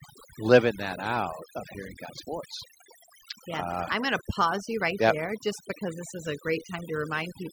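Throughout the speech, the background drops to near silence flecked with twinkling specks: overdone noise removal, its suppression pulling quiet vocal detail down with the noise.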